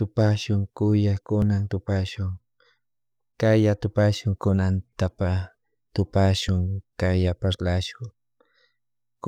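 A likely dropped buffer (overrun), where the input was not read before the hardware overwrote it, cuts a few milliseconds from the speech at 1.42, 4.93 and 6.49 s. The surrounding audio is spliced together with no gap, so each point is a brief jump.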